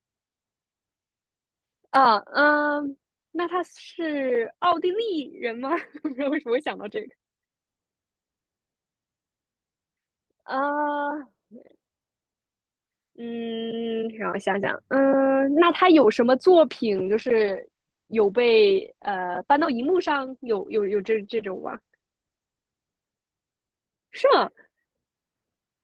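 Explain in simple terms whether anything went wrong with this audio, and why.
A call bitrate drop hits from about 16.95 s to 23.75 s. The connection seemed to get worse, so the call software told the audio encoder to squeeze the speech into far fewer bits. For about 5.5 seconds it stays at its lowest quality, sounding rougher and more muffled. The crisp high sounds, which normally reach up to 20 kHz, are cut off above roughly 8 kHz. Near 23.75 s the quality recovers.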